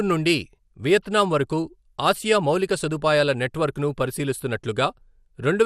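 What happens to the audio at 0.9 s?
At 0.9 s the speech sounds dull and muffled, with a gurgling, granular roughness, and that character runs through the whole clip rather than starting there. It is MP2 compression damage, likely from a low bitrate, one that points to around 80 kbps. The codec divides the sound into 32 sub-bands and shares out bits; starved of them, upper bands drop out and flicker while the rest are quantised coarsely.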